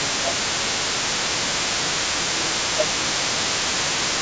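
From the start and running through to 4.21 s, the echo canceller likely left part of the loudspeaker signal in the microphone path, so the other side's voice leaking through sits under the speech, roughly 15 dB below it. Where both sides talk at once, the canceller likely cannot tell the local talker from that echo and turns everything down. This is speech suppressed in double talk, at 0.0 to 0.4 s, 1.24 to 1.52 s, 1.81 to 2.01 s and 2.17 to 3.39 s, with the voice dipping by about 15 dB.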